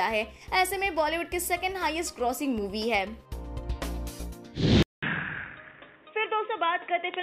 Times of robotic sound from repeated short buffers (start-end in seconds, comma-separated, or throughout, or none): none